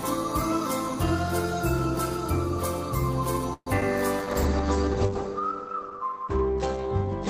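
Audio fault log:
3.53–3.68 s, call audio freeze: the sound stalls for about 0.15 s. The last sound is stretched into a fading buzz that trails off, with roughly 60 ms of near-silence before things pick up again. Nothing seems lost, since the audio resumes right where it stopped, and the whole stretch after it now lags by about 130 ms. That's the signature of packets held up in transit, most likely draining the jitter buffer and leaving the receiver to improvise until they turned up.
3.80 s, short concealed packet loss: there's a quick smear lasting a few hundredths of a second. About 20 ms of the stream never made it to the decoder. The receiver patched the hole by extending the preceding sound for a few milliseconds and then crossfading back into the real signal. So you hear a brief wobble rather than a clean gap.
4.20–7.29 s, call bitrate drop: from here to the end, the audio turns duller and rougher. 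The encoder was pushed from 32 down to 12 kbps, and it sat at that floor for about 2.7 s. At that rate Opus quantises everything more coarsely and narrows the band from 20 kHz to 8 kHz. That's why the top end vanishes and a watery, grainy texture creeps in.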